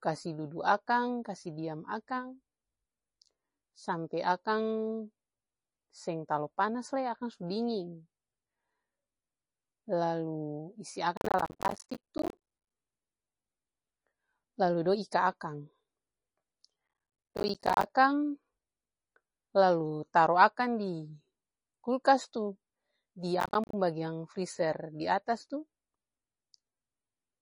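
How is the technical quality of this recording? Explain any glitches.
The technical quality is poor: the speech has a dull, watery coloration throughout and is broken by three bursts of crackle.

Throughout, nothing is heard above about 10.5 kHz, and the sound has a swirly, chirpy texture. This likely comes from MP3 compression at a low bitrate, around 32 kbps, where the encoder cuts the treble and drops weak frequency components. Unlike plain low-pass filtering, it has a shifting, watery texture.

From 11.17 to 12.70 s, 16.88 to 17.90 s and 23.40 to 23.73 s there is processor overload crackle: a gritty tearing over the speech. The processor repeatedly misses deadlines for buffers of around 10 ms, and each miss leaves a short hard-edged silence. Unlike a single dropout, these are dense runs of gaps that stop once the load eases.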